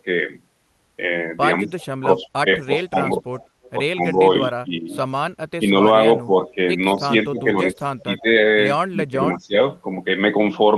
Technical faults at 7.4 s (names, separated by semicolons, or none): speech suppressed in double talk